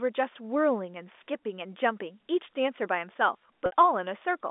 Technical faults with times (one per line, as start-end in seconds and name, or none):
3.66-3.71 packet loss with pitch repetition